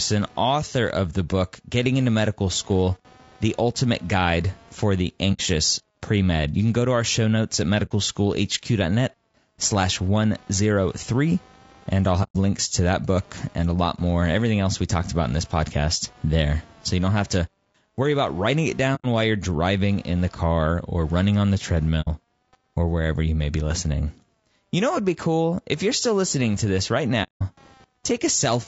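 Computer activity noise runs through the whole speech clip: a buzzing, pulsing interference that repeats roughly 200 times a second and sits far below the speech, about 35 dB down. It comes from the computer's changing load (processor, graphics or mouse activity) pulling on the ground shared with the audio circuit. Because it follows the machine rather than the speaker, it rises and falls on its own, independent of the speech.

Low-delay AAC compression damage is also present from start to finish and is plainly audible. The speech sounds rough and grainy, with a noisy fill between the harmonics and a thin, synthetic-sounding top end. The likely cause is the AAC-ELD codec used for video calls, running at a low bitrate around 32 kbps. Its very short frames cannot resolve pitch harmonics finely, and too few bits are left to code the spectrum cleanly.

AAC frame loss with muting cuts soft-edged holes into the speech at 5.33–5.41 s, 7.85–7.92 s, 12.23–12.36 s, 18.95–19.06 s, 22.01–22.08 s and 27.23–27.42 s. 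The gaps remove about 60, 60, 120, 90, 60 and 180 ms respectively. Each time, the decoder lost frames and zeroed their spectrum, so the overlapping windows fade the sound out and back in. The final gap is the longest.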